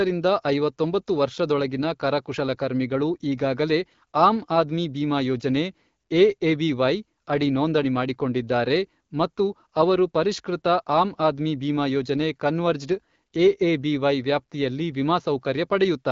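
Speech over an AMR wideband (HD Voice) link, with nothing above 7.4 kHz, and no technical faults to report.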